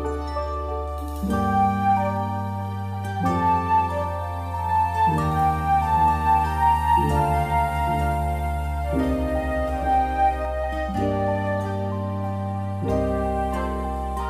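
A doubled audio track runs from 5.81 to 10.45 s: a second full-band copy trails the original by about a second, a few decibels quieter, dry and uncoloured, cutting in and out abruptly. A slower duplicate capture path is the likely cause.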